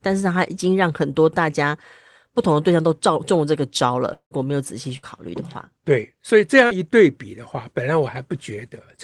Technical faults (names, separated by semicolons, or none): long network dropout; burst of packet loss; short concealed packet loss